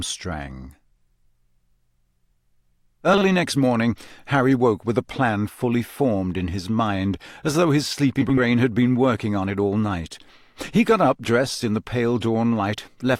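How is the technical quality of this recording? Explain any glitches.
Two short glitches interrupt the speech: brief garbled flutters, both caused by frames out of order. At 3.13 to 3.23 s, just before "next morning", and at 8.22 to 8.41 s, between "mind as though his" and "had been working on", two neighbouring blocks of audio (40 ms and 80 ms respectively) were decoded in swapped order. Each stretch plays with its halves exchanged, with no lost time.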